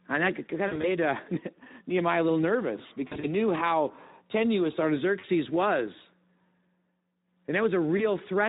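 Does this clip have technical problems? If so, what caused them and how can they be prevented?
Yes. A Speex codec running at a low setting, consistent with roughly 11 kbps, starves the excitation of bits, so the speech sounds noisy and hoarse throughout. Raising the Speex quality setting or using a modern wideband codec prevents this.

VoIP packet loss concealed by the speech codec appears at 0.67–0.89 s, 3.08–3.32 s, 5.19–5.28 s and 7.97–8.06 s. The decoder extrapolated the last pitch and filter at fading gain, leaving buzzy, smeared gaps of up to 40 ms in a row. Jitter buffering, forward error correction or a more stable network connection would prevent it.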